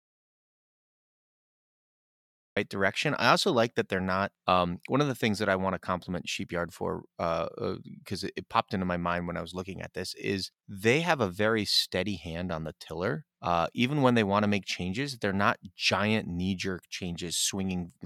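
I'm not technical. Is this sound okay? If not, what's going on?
No. The speech opens with an audio dropout to silence: from the very start until 2.57 s there is nothing at all, not even background hiss, before "direction I also like" begins mid-flow. A natural pause keeps faint room sound; this gap is empty, most likely because the input signal was lost.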